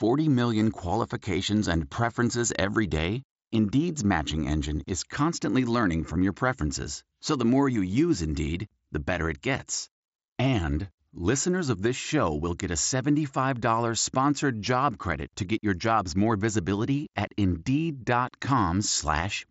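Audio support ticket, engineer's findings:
No fault found on the speech path; the audio stops near 7.7 kHz, as expected from an mSBC wideband Bluetooth headset link running normally.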